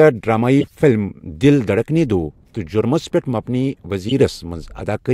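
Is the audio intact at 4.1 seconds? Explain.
No. From 4.09 to 4.12 s there is a corrupt frame decoded. Bits inside the compressed data were flipped, and the decoder played the damaged data anyway. Misread gains and codes put energy at the wrong frequencies. The result is a loud, brief chirp, squeak, blip or burst of noise, peaking at roughly 5 dB below full scale. Its 30-millisecond length points to a couple of damaged frames.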